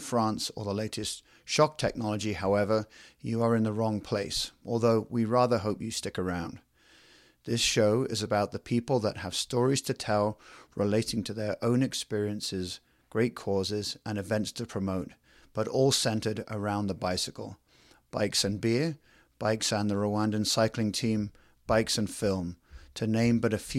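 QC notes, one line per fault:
No technical faults are audible anywhere in the recording, and nothing in the signal calls for a QC entry.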